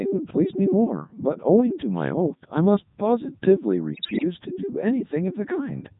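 Codec 2 vocoder coding runs through the whole of this speech clip, heavily: the voice is rebuilt from sine waves using only pitch, voicing, energy and a spectral envelope, so it sounds robotic and buzzy, which fits the 3.2 kbit/s mode. Bit errors on digital voice radio strike from 3.94 to 4.24 s. Roughly 7 percent of the bits arrive flipped, and because each bit steers a whole frame's pitch, level, voicing or spectrum, the synthetic voice lurches in pitch and loudness and breaks into warbling gibberish.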